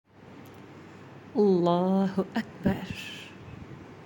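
No technical faults are audible.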